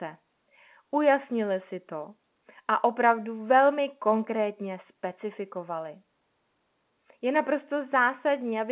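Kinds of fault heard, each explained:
No faults heard in the speech; the A-law G.711 telephone coding tops out at 4 kHz, with a faint level-following quantisation hiss, as that format normally does.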